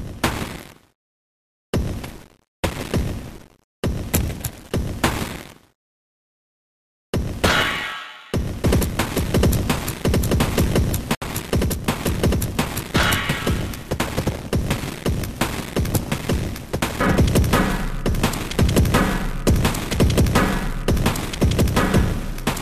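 At 11.15 s a gap at a join of encoded pieces opens for about 68 ms, lasting until 11.22 s: encoder start-up delay and end padding were left in when separately encoded sections were joined. Unlike a dropout, nothing is lost; the sound resumes exactly where it stopped, with smeared edges.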